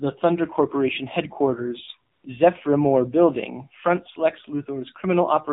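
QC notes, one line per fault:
Throughout: AMR narrowband mobile codec. The speech sounds thin, buzzy and synthetic, with nothing above 4 kHz. The vocal-tract model is driven by too few pulses per subframe, and the damage level fits a low mode around 7.4 kbps.
2.12 to 2.24 s: AMR comfort noise. For 120 ms the real background drops out and a smooth, steady hiss takes its place before cutting back. Speech frames stopped there, and the receiver filled the gap with noise rebuilt from a rough level and spectrum.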